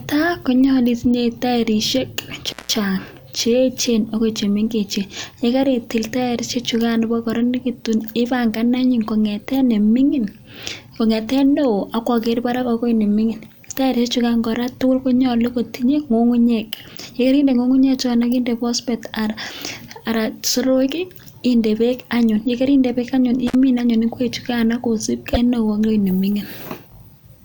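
A loose cable or plug in the speech path opens briefly at 2.46 s, an intermittent contact that lasts until 2.75 s. The signal drops out for about 170 ms, with crackle as the connection breaks and remakes and faint hiss in the gap. The same contact fault returns between 23.47 and 23.55 s, right after "beek anyun yekerindee beek" and before "anyun ingwechukaano". This time the line stays open for about 54 ms, a shorter crackly dropout.

At 25.31 to 25.37 s, just after "anyun ingwechukaano", the compressed stream carries damaged data. The decoder can't read those frames properly, loses its place and hunts for the next valid frame header. The result is a brief glitch lasting roughly 60 ms.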